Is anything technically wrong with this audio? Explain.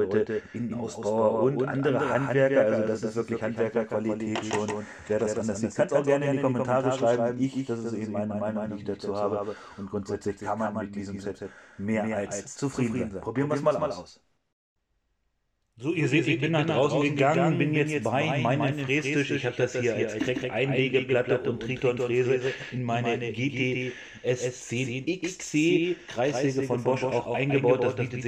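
Yes. A doubled audio track runs throughout: a second full-band copy trails the original by roughly 150 ms at about 5 dB lower, likely from a slower capture path or an edit holding two copies out of step, producing a dry, slapback-like repeat with no room decay.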